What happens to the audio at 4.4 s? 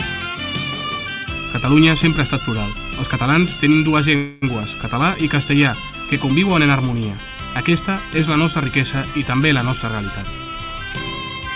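A fading buzz stretches the last sound from 4.16 to 4.45 s, then the audio resumes unbroken: a call audio freeze, likely from delayed packets emptying the jitter buffer.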